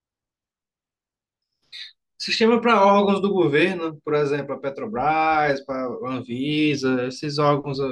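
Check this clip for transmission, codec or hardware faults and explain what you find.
No faults found in this clip.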